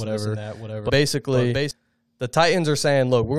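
A second capture path or misaligned edit likely mixed the speech in twice, so from the start until 1.71 s a doubled audio track trails about 0.7 s behind, roughly 5 dB quieter, dry and cutting off abruptly. From 0.88 to 0.90 s, damaged data in the compressed stream makes the decoder lose frame sync, producing a brief glitch.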